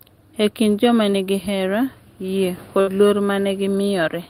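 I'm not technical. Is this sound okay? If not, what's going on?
No. There are two brief dropouts of the kind that happen on internet calls.

At about 1.11 to 1.15 s there is a short concealed packet loss. A tiny piece of the speech arrived too late, so the receiver briefly stretched the sound just before it. This gives a quick smear or wobble of a few hundredths of a second.

At about 2.81 to 2.89 s there is a burst of packet loss. Several pieces in a row were lost, so for a moment the last sound is held as a buzz or hiss that fades. The speech then picks up slightly further along with a small chunk skipped. This gap is longer than the first one and clearly loses audio.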